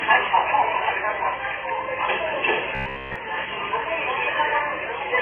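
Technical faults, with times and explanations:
Throughout, mains hum: there's a steady low tone sitting under everything at 60 Hz, roughly 30 dB below the main sound. That's the power line leaking into the signal path, typically through a ground loop or a transformer sitting too close to the gear. Because it never changes pitch or level, it reads as a constant drone rather than part of the recording.
Throughout, AAC compression: the whole clip sounds dull and boxed-in, with the top end cut away, and there's a smeared, watery texture on anything sustained. That's likely AAC-LC at a very low bitrate, around 16 kbps. At that rate the encoder drops the top of the spectrum entirely and quantises what's left very coarsely against its hearing model, so the damage here is heavy, leaving thin, gappy detail and a fizzy edge on the sound that remains.
2.75 to 3.16 s, robotic sound from repeated short buffers: for about 0.4 s the sound turns into a rigid, metallic buzz pitched at about 67 Hz, loosely tracking the original's shape. 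That's likely the playback side running dry and looping its last chunk of audio while the real material is skipped. The whole stretch is repeats, and looping the same snippet imposes a pitch of one over its length, which points to a buffer of about 15 ms.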